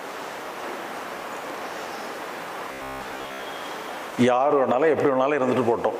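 Robotic sound from repeated short buffers runs from 2.72 to 3.42 s. The sound turns into a rigid, metallic buzz at about 67 Hz, likely because a 15 ms slice kept looping while most of the real audio in that stretch was skipped.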